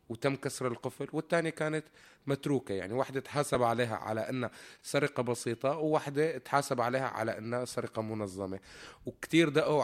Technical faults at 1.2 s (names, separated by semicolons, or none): none